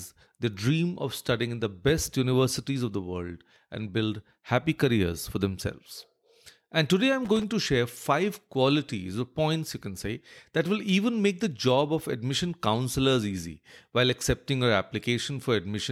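At 7.25 s, right after "today I'm", a loose connector crackle breaks in for about 0.19 s, ending just before "to share five qualities". A worn or dirty contact is making and breaking as it shifts, chopping the speech into fragments. Unlike a single regularly spaced digital click or a clean dropout, this burst is ragged and irregular, a brief scratchy rattle with no steady rhythm.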